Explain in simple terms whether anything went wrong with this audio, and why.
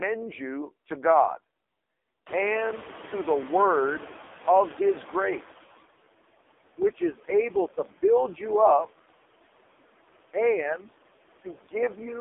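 Noise suppressor artifacts run from start to finish. A noise suppressor guesses which parts of the sound are steady background hiss and turns those down, many times a second. Here the room noise, which gets louder at around 2.5 seconds, is pushed down hard in the pauses and creeps back up whenever the voice returns.

The AMR narrowband mobile codec also shapes the whole 12-second clip. This is the older phone-call speech format. Rather than storing the sound itself, it sends a rough model of how a mouth and throat would produce it, rebuilt from a handful of pulses. Everything above about 3.7 kHz is gone, so the sound is muffled like an old phone line. The damage here is heavy, which fits one of its lowest-quality settings, and the voice sounds buzzy and artificial, with the background turning into a swirling smear.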